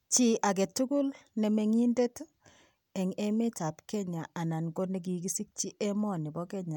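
No technical faults can be heard anywhere in this speech recording. There is nothing in the audio that calls for a timestamp or an explanation.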